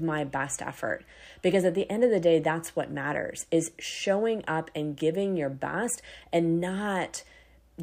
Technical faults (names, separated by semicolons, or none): none